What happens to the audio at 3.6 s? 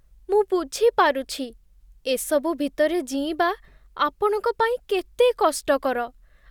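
Nothing goes wrong at 3.6 s: the speech carries on intact through that moment, with no dropout, click, distortion or other fault.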